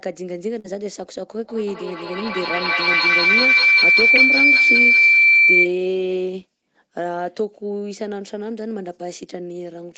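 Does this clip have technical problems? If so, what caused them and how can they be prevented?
Yes. From 0.59 to 0.73 s there is a burst of packet loss. For roughly the first 46 ms the receiver carries the last sound forward and fades it, so it turns into a dying buzz or hiss. Then about 40 ms of audio is simply gone before the sound picks up again further on. On a spectrogram the harmonics go flat and smeared, then fade before the sound jumps ahead. The waveform shows a decaying envelope and then an abrupt resumption. A wired connection, or a larger jitter buffer with forward error correction, would prevent it.

From 1.44 to 5.76 s there is a feedback howl. Two devices on the same call in one room form a loop from microphone to loudspeaker that gains level on each pass. The repeats, about every 0.2 s, the loop's delay, narrow to a tone near 2 kHz, peaking about 9 dB above the speech. A spectrogram shows a bright horizontal line at that frequency. 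The waveform swells as the howl builds. Muting all but one device in the room, or using headphones, prevents it.

At 4.16 to 4.19 s, inside the howl, there is a short concealed packet loss. About 16 ms is filled by extending the preceding sound, and about 20 ms of the original never returns. This gives a brief smear or wobble. On the spectrogram it appears as a thin vertical seam where the harmonics briefly freeze. On the waveform, the cycles before it repeat and then join the real signal again. A more stable network path and forward error correction would reduce it.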